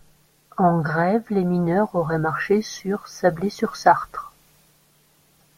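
No technical faults are audible anywhere in this speech recording.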